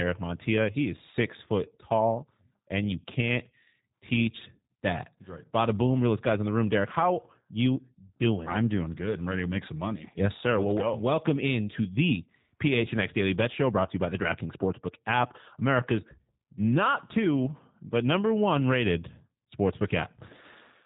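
From start to finish the speech carries plainly audible G.729 codec damage, consistent with the G.729A variant running at 8 kbit/s. The encoder reduces each 10 ms frame to a vocal tract filter, a pitch predictor and a handful of pulses, so the voice sounds rough, buzzy and faintly synthetic. On a spectrogram, energy stops dead at 4 kHz with nothing above, and harmonics look smeared and blotchy rather than cleanly striated.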